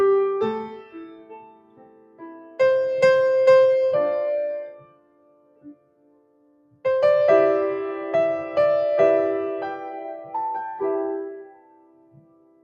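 A noise suppressor built for speech runs on this sound throughout. It treats sustained material as noise, so the level swings by around 20 dB and pumps. Sound cut by the noise suppressor sinks at 0.64 to 2.6 s, 4.7 to 6.85 s, and 11.38 s to the end. Held parts drop by about 17 dB and thin out.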